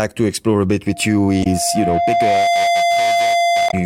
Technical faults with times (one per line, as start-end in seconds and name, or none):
0.87-3.85 loudspeaker feedback squeal
1.40-1.47 damaged data in a compressed stream
3.67-3.74 damaged data in a compressed stream